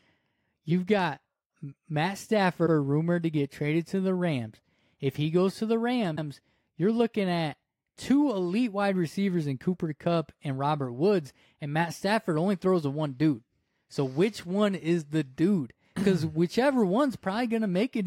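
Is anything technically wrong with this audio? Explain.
Yes, there are repeated frames in this speech. A block from 2.65 to 2.73 s plays twice, then another from 6.15 to 6.26 s, so the audio repeats 78 ms and 105 ms chunks as short stutters. Each stutter adds its length to the clip's duration.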